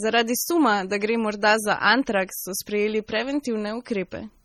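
Throughout, the speech has likely been through heavy MP3 compression at a starved bitrate, one that fits about 32 kbps. Weak frequency lines drop in and out between frames, giving a watery, swirly sound with smeared attacks, and nothing above 19.4 kHz.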